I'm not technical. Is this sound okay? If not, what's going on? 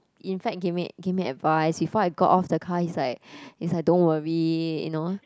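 Yes, nothing stood out as a problem when I listened to this recording.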